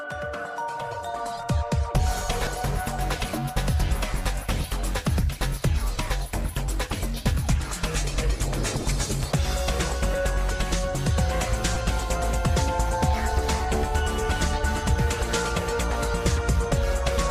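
Lost LE Audio frames twice: a short noisy smear at 2.45–2.47 s (about 20 ms, fitting two frames) and at 11.75 s, where the decoder patched over missing data.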